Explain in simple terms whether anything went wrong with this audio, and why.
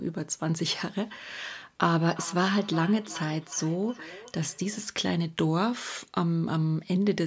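Two devices in the same room were on the same call, and one was playing out what the other's microphone sent. That microphone picked the playback up again, and neither device's echo canceller could remove sound coming from the other device. The result is a feedback echo between two devices from about 2.03 to 4.92 seconds: the speech comes back roughly every four tenths of a second, each repeat quieter, thinner and more ringing than the last.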